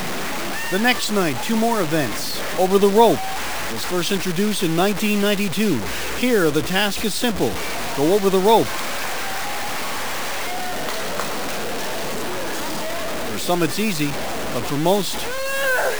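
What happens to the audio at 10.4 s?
At 10.4 s, like everywhere else in the clip, the sound is grainy and gritty, with distortion that tracks the signal. That's likely low bit depth without dither: around 5 bits, truncated, leaving the error only about 10 dB below the audio itself.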